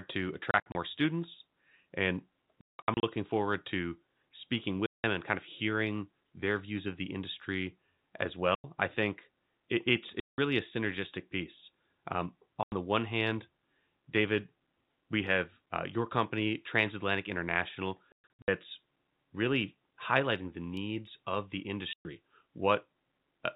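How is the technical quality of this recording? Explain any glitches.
The recording is marred by repeated dropouts from packet loss filled with silence, heard over the narrowband sound of G.711 telephone coding, which cuts everything above 4 kHz.

Packets of audio failed to arrive, and the receiver inserted silence in their place. Every gap is a multiple of 30 ms, which points to 30 ms packets. The holes have abrupt edges that chop the speech. They fall at 0.51–0.75 s, just before "students and", with 120 ms missing in scattered runs up to 60 ms; at 2.61–3.03 s, where 300 ms is lost with one run of 180 ms; at 4.86–5.04 s (180 ms); at 8.55–8.64 s, between "of the industry as" and "I think it it's" (90 ms); at 10.2–10.38 s (180 ms); at 12.63–12.72 s (90 ms); at 18.12–18.48 s, where 270 ms goes in runs up to 120 ms; and at 21.93–22.05 s, after "the needs of the" (120 ms).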